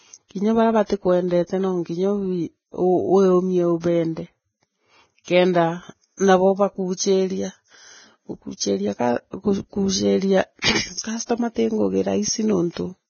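Throughout, the speech has been squeezed through a low-rate lossy encoder, most likely Vorbis compression at heavy settings, with damage that fits a bitrate around 16 kbps. The encoder drops everything above 6.6 kHz and quantises the remaining upper band so coarsely that its detail turns into noise of similar energy. The result is dull yet hissy and grainy, with roughened vowels and consonant onsets that lose their edges.

At 5.24 s, 10.61 s and 12.74 s, a sharp onset lands late in a transform block, and the quantisation noise meant for the loud part spreads back into the quiet moment before it. This pre-echo lasts 35 ms, 26 ms and 29 ms respectively, heard as a brief hiss leading into a softened, smeared attack. The second one falls just before "customer tii".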